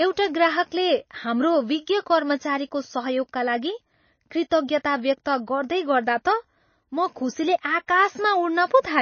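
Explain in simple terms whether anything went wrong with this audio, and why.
The speech was most likely squeezed hard by MP3 compression, which stores sound in small slices and throws away detail it judges unimportant when space runs short. Here it cut off everything above about 6.6 kHz, so the voice sounds dull and muffled, without its crisp top. Faint parts of the sound flicker in and out between slices, giving a watery, swirly quality with metallic edges on s sounds.

Pre-echo appears at 4.50 s and again at 7.87 s. The compression spreads its noise evenly across each slice of sound, so when a sharp attack sits late in a slice, that noise also spills into the quiet moment just before it. At both points a brief hiss, roughly 17 to 18 milliseconds long, comes ahead of the attack, and the attack itself sounds soft and smeared.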